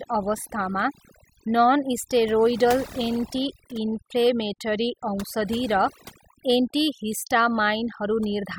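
From start to finish there's overdone noise removal: the denoiser was pushed too hard, so any frequency band close to its noise estimate gets crushed, quiet speech detail included. The gaps drop away and break up into little twinkling specks.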